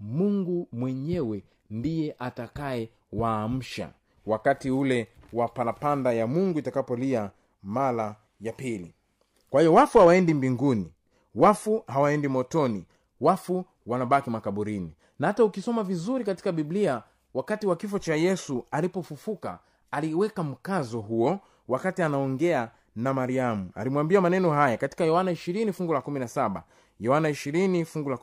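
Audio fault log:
0.0–16.75 s, crude rate conversion: a faint gritty fizz, roughly 45 dB below the speech, follows loud and bright syllables. Unfiltered linear interpolation, which fits a 48 kHz to 44.1 kHz change, leaves inharmonic tones.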